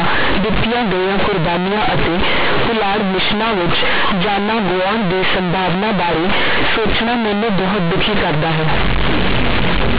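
From start to finish, companded audio read as linear: mu-law telephone bytes are played as plain 8-bit samples, producing harsh, buzzy, overloud distortion with heavy noise in pauses.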